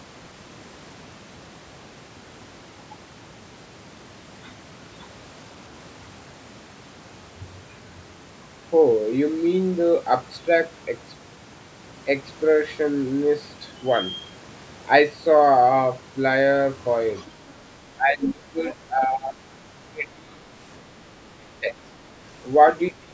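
Speech on a call, with the talker's voice repeatedly dipping by roughly 15 to 25 dB at 17.96–18.58, 18.74–19.38, 19.90–20.45, 21.35–21.89 and 22.91 s to the end, likely speech suppressed in double talk, shown as sudden waveform notches and faded spectrogram bands. Between 18.67 and 18.74 s, a faint second voice about 25 dB down comes through, likely the other side's voice leaking through, seen as a thin, low-energy smear.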